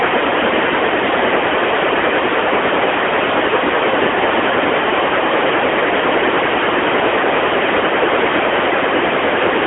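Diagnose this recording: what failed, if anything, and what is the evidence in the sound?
The codec stage failed: the speech has passed through an AMR narrowband mobile codec for the whole clip. A spectrogram shows a hard ceiling near 3.7 kHz with nothing above, and a telephone band of 300 Hz to 3.4 kHz. The plainly audible buzzy, synthetic texture fits a mid-rate mode around 10 kbps, where a few excitation pulses drive a vocal-tract model.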